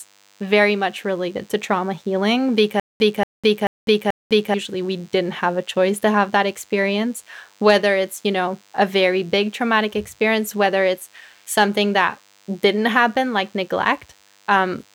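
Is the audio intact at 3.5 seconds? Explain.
No. From 2.80 to 4.54 s there is a stutter with silent gaps: the same 233 ms fragment of speech plays four times, each repeat followed by about 203 ms of digital silence, giving an even 436 ms cycle. The likely cause is a stalled player or stream replaying its last fragment on each retry and then running empty, so the speech that belonged in that span is lost.

A DECT cordless phone buzz also runs under the speech at this point. It is a steady, thin 100 Hz buzz with many harmonics, roughly 35 dB below the speech. Nearby DECT equipment transmits a short radio burst every 10 ms, and the audio circuitry rectifies those bursts into this tone.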